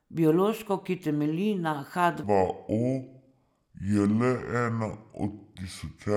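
From 2.24 s to the end, there's a section at the wrong speed: the speech drops to about two-thirds speed, roughly seven semitones deeper and slower, likely from a clock mismatch.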